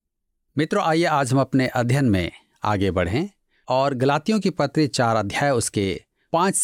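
A speech recording with nothing technically wrong with it.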